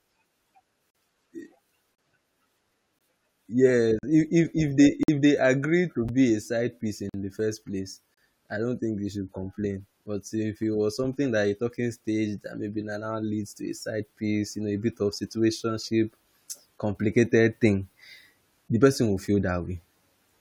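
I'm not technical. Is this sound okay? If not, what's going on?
No. There is a gap between stream segments at 0.90, 1.95, 2.99, 3.99, 5.03, 6.09, 7.09 and 8.14 s, roughly once a second. The speech arrives in one-second pieces whose timing doesn't quite line up, so the player fills each mismatch with silence. You hear short, hard-edged dropouts of about 6 to 50 ms, such as between "agreed to" and "a side piece". Nothing is actually missing; the speech just stutters.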